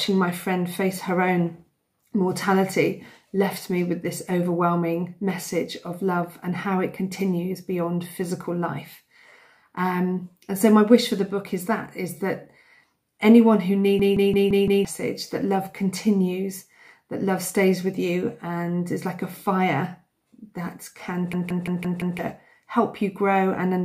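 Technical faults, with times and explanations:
14.00–14.85 s and 21.33–22.19 s, system hang loop: the system froze while the hardware replayed one 170.67 ms buffer, which fits an 8192-sample buffer. Each time the same fragment repeats five times at 5.86 Hz as a stutter, and about a second of audio is lost.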